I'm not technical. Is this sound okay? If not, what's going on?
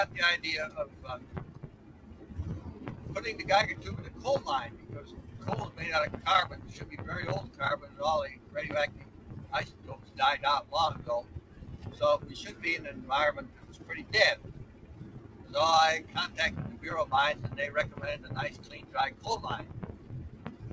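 No. The main problem is a noise suppressor applied to music or sounds. It's a filter built to clean up a talking voice on a call, and it was left running over sound it wasn't designed for. It mistakes steady, lingering sound for background hiss and keeps turning it down. Throughout the clip the level seems to breathe and pump, and sustained parts thin out. Sharp, sudden hits mostly still come through.

You can hear specific moments of sound cut by the noise suppressor at 0.88 to 2.27 s, 4.76 to 5.32 s, 7.5 to 11.58 s, 13.5 to 13.86 s, 14.61 to 15.51 s, 18.55 to 19.24 s, and from 19.94 s to the end. In each, held or fading sound sinks or its tail is clipped short. Unlike a dropout, the sound never vanishes completely, and sudden attacks survive, which points to the suppressor.

The call connection itself adds its usual coding noise and a dull top end, because nothing above 8 kHz gets through.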